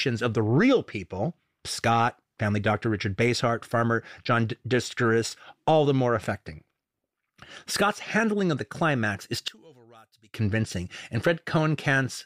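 One channel inverted, 9.48 to 10.34 s, right after "of the climax is": the speech drops by about 29 dB to a faint trace. One stereo channel likely has reversed polarity, so the centred speech common to both cancels in the mono sum.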